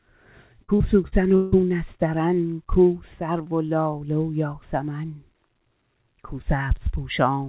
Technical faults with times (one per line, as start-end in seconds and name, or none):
0.64-1.55 repeated packet loss (robotic sound)